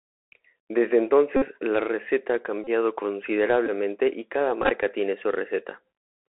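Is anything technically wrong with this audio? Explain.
Yes. Throughout, the speech carries Bluetooth CVSD headset codec damage: one-bit delta coding with adaptive step confines it to roughly 300 Hz to 3.7 kHz, leaving granular hiss, scratchy sibilants and slope-overload distortion on loud highs.

Bluetooth headset packet repeated occurs at 1.37–1.43 s, 2.64–2.67 s, 3.66–3.70 s and 4.62–4.70 s. Lost packets were replaced by redecoding the previous packet, so every 3.75 ms repeat produces a brief buzz near 267 Hz. The last event is scattered, in runs of about 10 ms.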